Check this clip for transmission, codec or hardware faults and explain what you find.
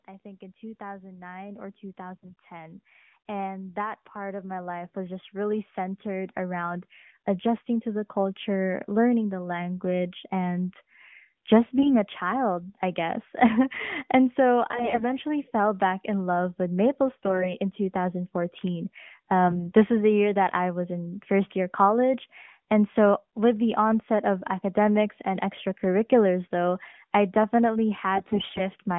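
Two faults are present in this speech clip: a slow upward gain drift and repeated bursts of AMR bit errors. Both sit on a narrowband mobile path, with the sound confined to roughly 150 Hz to 3.4 kHz and lightly coloured in a way that fits AMR-NB's 12.2 kbit/s mode.

Automatic gain rising runs from 0.05 s to 9.77 s, lifting the level by about 18 dB. The call's automatic gain control judged the input too quiet and kept increasing its gain over nearly ten seconds. The voice and the background noise rise together, so the noise floor climbs along with the speech. This separates it from a speaker moving closer to the microphone, which would make the voice louder relative to the room. The change is a smooth swell, with no sudden step in level.

AMR bit errors occur at 2.16–2.35 s, 11.76–11.97 s, 14.70–15.06 s, 17.16–17.50 s, 19.45–19.72 s and 28.16–28.69 s, each lasting a few hundred milliseconds. 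On a weak radio link, the less-protected bits in many consecutive frames arrived corrupted. The checksum on the core bits still passed, so the decoder played the damaged frames instead of discarding them. Its excitation pulses landed in the wrong places, and the fine gain and spectral values were off. Pitch and loudness hold roughly steady, but the voice turns hoarse, gargly and scratchy. That distinguishes these bursts from frame loss, which would produce gaps or smeared, concealed repeats. The corruption is heavier in the bursts at 2.16, 14.70 and 28.16 s and milder at 17.16 and 19.45 s.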